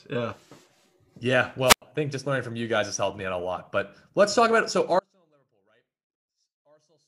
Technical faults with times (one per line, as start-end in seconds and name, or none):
1.66-1.82 wireless microphone squelch dropout
4.99-7.07 audio dropout to a faint residue